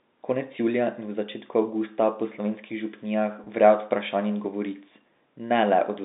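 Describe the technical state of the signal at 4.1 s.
At 4.1 s the audio is intact, with the speech carried over ordinary G.711 telephone coding, limited to the usual telephone band of about 200 Hz to 3.7 kHz.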